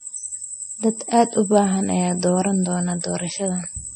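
From start to finish the speech carries plainly audible codec damage, most likely MP3 compression at a low bitrate, consistent with roughly 32 kbps. Nothing reaches above 9 kHz, so the top octave is simply gone and the sound is dull. With so few bits, weak frequency lines are dropped and restored from frame to frame, giving a watery, swirling texture, metallic chirps on s sounds, and smeared consonant attacks.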